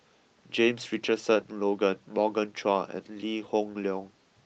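No technical faults can be heard anywhere in the recording. The speech continues without interruption from beginning to end.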